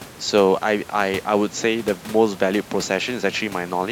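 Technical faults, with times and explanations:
No technical faults can be heard in the speech. A room noise sits about 21 dB below the speech, and it belongs to the recording space rather than to the system.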